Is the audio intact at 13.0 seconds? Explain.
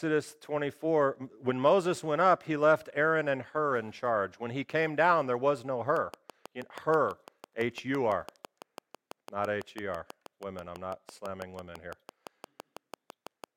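No, a train of clicks runs from 5.97 to 13.45 s: regular pulses about 6 per second, likely from interference, tick sharply above the speech level.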